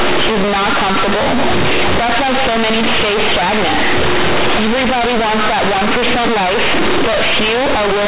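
From start to finish the speech comes through as companded audio read as linear: the bytes were mu-law coded but are being played straight as plain 8-bit samples, with no expansion step. Because mu-law keeps the sign in the top bit of each byte, every sign flip throws the output across roughly half its range, so quiet bits blow up as big as loud ones. You get a harsh, very loud, buzzy distortion, with heavy noise filling the pauses, all inside the usual telephone band topping out at 4 kHz.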